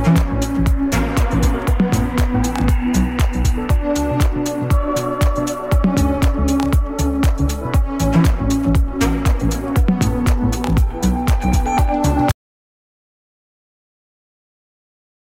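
At 12.32 s an audio dropout to silence begins, abrupt silence with no room tone, likely a lost input, unlike a fade, and lasting to the end.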